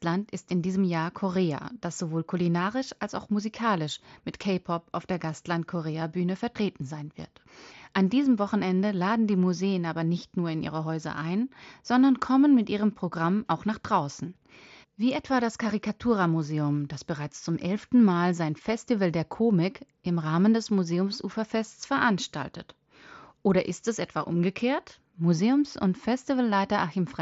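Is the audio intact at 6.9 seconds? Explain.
Yes, the speech at 6.9 seconds comes through intact, carried over the wideband Bluetooth mSBC headset link with nothing breaking or disrupting it at that moment.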